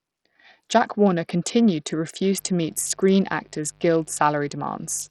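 Speech, and it's been through the wringer. All the way through, the treble keeps dropping out and flickering, with a gritty haze and some aliasing riding on the sound. That's very likely Bluetooth SBC compression at a starved bit pool, something in the region of 64 kbps, where the top sub-bands get almost no bits and the rest are quantised coarsely. Then from about 2.36 s to the end a steady, raspy mains buzz comes in, sitting fairly low under the speech. It's a 50 Hz buzz with a spiky edge, the kind you get when switching spikes from a dimmer or rectifier, or a missing shield, spray harmonics up into the kilohertz range.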